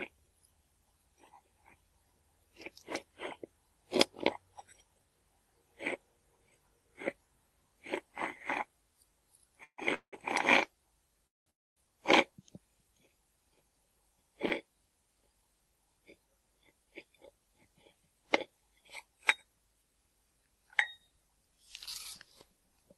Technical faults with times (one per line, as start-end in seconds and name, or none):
9.63-10.14 call audio freeze
11.27-11.85 call audio freeze